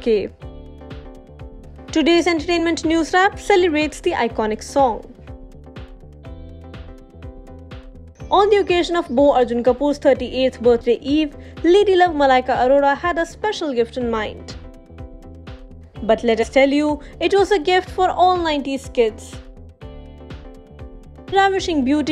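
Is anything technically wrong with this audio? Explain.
Yes. Damaged data in a compressed stream causes brief blips at 2.58, 10.80, 16.42–16.44 and 21.32 s. The decoder loses frame sync on corrupt bytes and resyncs.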